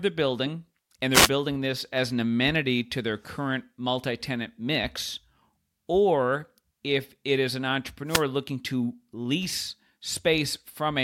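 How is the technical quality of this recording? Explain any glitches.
The recording is marred by two brief wireless microphone noise hits, at 1.12 to 1.30 s and 8.07 to 8.24 s. The FM radio link fades as reflected signals cancel, letting receiver noise surge over the speech as a short swish of static lasting under a fifth of a second.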